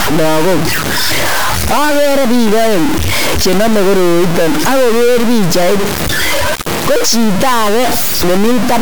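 Speech carries harsh, buzzy stuck-bit distortion throughout, likely from a high data bit held fixed. The waveform shows large offset steps near full scale, and the spectrogram shows broadband noise filling the pauses.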